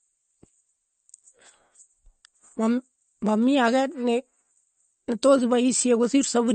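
Across the whole clip the speech has most likely been through MP3 compression at a low bitrate, about what a 40 kbps encode would give. Short of bits, the encoder has cut off everything above 8.6 kHz and dropped weaker frequency components that come and go from frame to frame. The result is plainly audible: the speech sounds dull at the top, with a watery, swirling texture running underneath it from start to finish.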